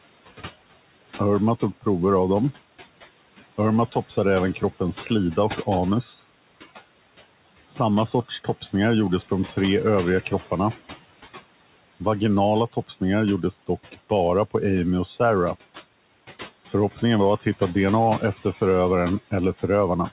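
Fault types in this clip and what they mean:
Noise suppressor artifacts: room noise sinks by about 16 dB in pauses and swells back under speech, unlike room noise that holds its level.
Speech cut by the noise suppressor: soft consonants and endings sink by up to about 18 dB in four stretches, so speech fades, not just the background.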